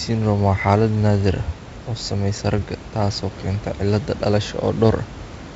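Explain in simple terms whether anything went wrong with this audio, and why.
Nothing went wrong here.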